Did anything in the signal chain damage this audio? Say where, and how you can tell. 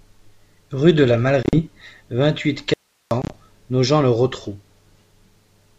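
Yes. Packet loss on the ADPCM call, at the network stage: 1.43 to 1.59 s after "de la", and 3.22 to 3.37 s. Several packets go silent. The decoder's predictor then loses sync, so the audio returns distorted.

An audio dropout to a faint residue runs from 2.74 to 3.11 s. The sound cuts abruptly to hiss about 45 dB down, likely from a break upstream of a still-live input.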